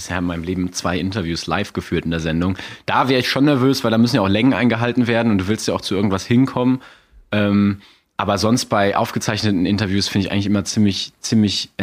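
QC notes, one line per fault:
No faults found in this speech recording.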